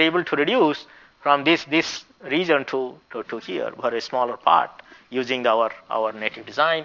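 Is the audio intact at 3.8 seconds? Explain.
No. Aliasing runs through 3.8 seconds and the whole clip. The sound was resampled down without an anti-aliasing filter, so content above 6 kHz folds back below that edge as false, unrelated tones. The fold point suggests a rate near 12 kHz. At 3.8 seconds those mirrored components sit roughly 20 dB under the wanted sound, giving the high end a gritty, metallic edge and a spectrum that runs hard up to 6 kHz.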